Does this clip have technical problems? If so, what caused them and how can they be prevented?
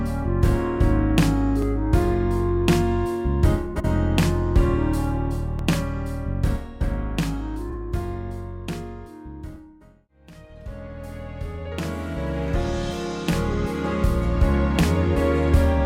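Yes. Clock drift buffer slips sound as about four regular clicks from 1.62 s to 13.53 s, one every 3.97 s. This is likely two devices on independent clocks differing by several hundred ppm, dropping or repeating roughly 150 samples at each slip. Locking both devices to one word clock or adding asynchronous sample-rate conversion prevents it.

Frames out of order occur at 3.75 to 3.85 s and 7.69 to 7.74 s. Adjacent blocks of about 46.4 ms and 23.2 ms swap places, so the sound flutters and loses no time. Reordering packets by sequence number before decoding prevents it.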